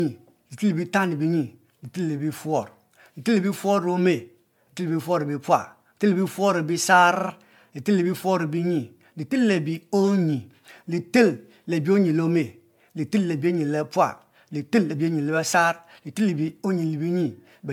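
Throughout, the speech shows generation loss: swirly, hollow smearing and blurred attacks beyond what one 96 kbit/s MP3 pass explains, likely from about four re-encodes.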